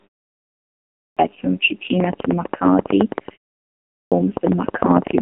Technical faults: AMR narrowband mobile codec; clipped start after a pause; train of clicks

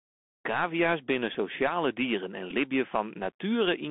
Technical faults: Bluetooth CVSD headset codec; Bluetooth headset packet repeated

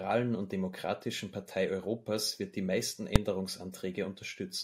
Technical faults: invalid numbers at full scale

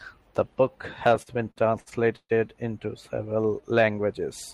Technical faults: repeated stalls (stutter); jitter buffer slow-down

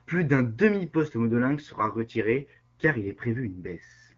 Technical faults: AMR rate drop

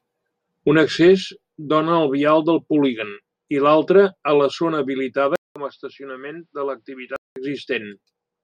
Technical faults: input switched to a poorer device

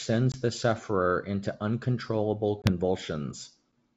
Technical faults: packet loss on an ADPCM call

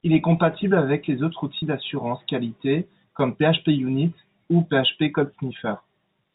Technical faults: packet loss with pitch repetition

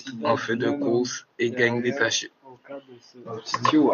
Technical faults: none

